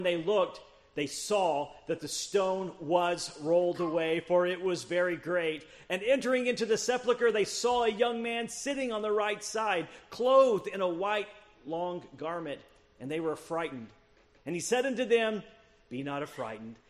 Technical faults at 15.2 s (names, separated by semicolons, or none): none